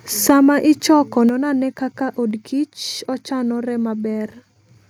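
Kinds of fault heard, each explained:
Microphone overload: A brief harsh, crackling edge at 0.29 to 0.31 s, just before "ichoko non ane kaka", with peak tops flattened. Likely the input was set so high that peaks overshot the converter's ceiling by about 4 dB, cutting off roughly 7 percent of samples.
Microphone volume stepped down: The whole sound, background included, abruptly drops by about 3 dB at 0.30 s, before "ichoko non ane kaka", and by about 6 dB at 1.29 s, before "non ane kaka". This is likely call software reacting to a too-loud or clipping microphone by lowering the device's input gain in steps.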